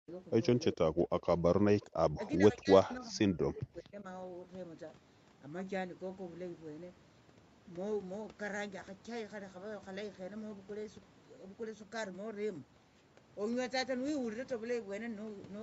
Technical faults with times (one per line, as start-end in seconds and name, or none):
0.00-0.09 speech suppressed in double talk
0.74-1.44 speech suppressed in double talk
1.81-1.93 echo leak
1.82-4.04 speech suppressed in double talk